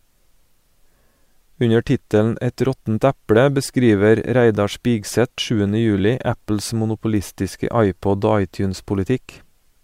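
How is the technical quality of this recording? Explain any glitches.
No audible technical faults.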